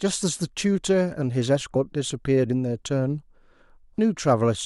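At 1.74 s and again at 3.97 s the speech lurches forward by about a tenth of a second. That's compressed frames skipped. Around four 23.2 ms frames never got decoded each time.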